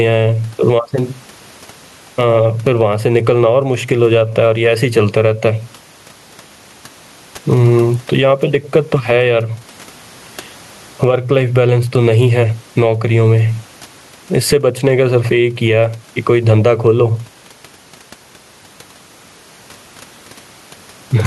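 From start to finish the speech shows gain pumping. The room noise sits about 41 dB below the speech, and the gain swings by roughly 15 dB, so the speech sounds squashed. The likely cause is input gain set far too high with a fast limiter clamping down on each peak. Unlike a noise gate, which drops the gaps toward silence, pumping makes the background louder in them.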